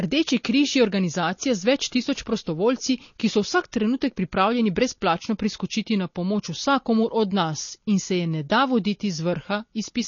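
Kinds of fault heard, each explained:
MP3 compression: Nothing in the speech reaches above 7 kHz, so the treble is cut flat. Plainly audible swirly, watery artefacts run through the whole clip. The likely cause is low-bitrate MP3 encoding, which fits a bitrate around 32 kbps.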